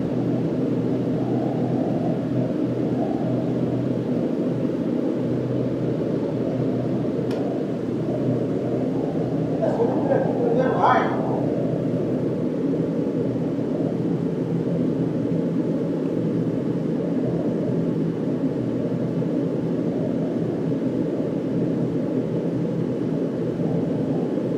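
Nothing goes wrong anywhere in the clip, so there's no technical fault to point to at any moment.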